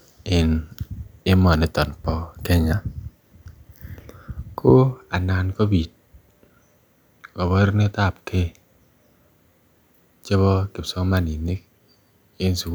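Nothing here calls for comment, since no technical faults turn up anywhere in this speech recording.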